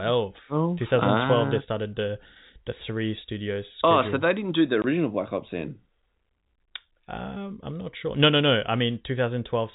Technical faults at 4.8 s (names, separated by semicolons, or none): packet loss filled with silence